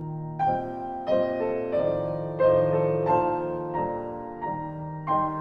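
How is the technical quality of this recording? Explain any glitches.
Quality is compromised by one fault that runs through the whole recording. Channel delay (comb filtering): one channel trails the other by roughly 10 ms. The mono sum cancels evenly spaced frequencies from around 40 Hz upward, so the sound is hollow and phasey.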